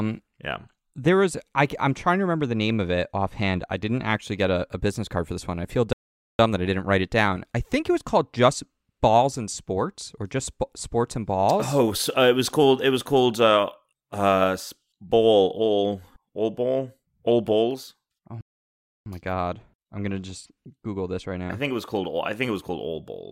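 At 5.93 s, just after "this one I feel", the speech halts in a playback stall lasting 0.46 s before resuming with "that I didn't write". A second stall at 18.41 s holds the output silent for 0.65 s, picking up again at "my god I'm gonna". The likely cause is the player running dry of data or its thread being blocked.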